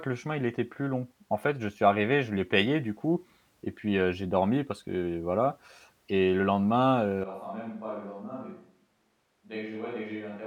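At 7.24 s, just after "voilà et le lendemain", the speech abruptly turns roomy and hollow and stays that way to the end. The level falls by roughly 10 dB, the low end thins out, and room noise sits around 35 dB below the speech, more exposed than before. This is most likely a switch to a distant microphone: the close mic's signal dropped out, leaving a pickup farther from the talker that captures more room.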